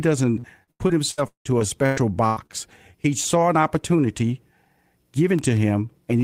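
From 0.39 to 2.51 s the speech breaks up with repeated packet loss. Ten gaps open in quick succession, the longest 176 ms. Each is patched by stretching the last sound, so about a third of the span turns choppy and robotic.

At 5.39 to 5.59 s a loud pop lands twice, a little above the speech level, while the talking carries on underneath. The likely cause is a brief voltage spike, such as a switch or static discharge, entering the signal chain.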